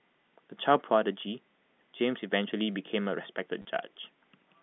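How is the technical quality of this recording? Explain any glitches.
Two short glitches interrupt this telephone-band speech recording, which passes through G.711 mu-law coding with its usual band of roughly 150 Hz to 3.5 kHz.

At 2.61 s, a bit error spike occurs: a flipped bit in memory or on a digital link throws three consecutive samples off by a power of two before they snap back. You hear one sharp, broadband tick that has nothing to do with the speech around it.

From 3.62 to 3.65 s, there is packet loss with the last packet repeated: 30 ms of audio went missing, which fits three 10 ms packets, and the receiver replayed the last good one until new data arrived. The repeats produce a brief robotic stutter.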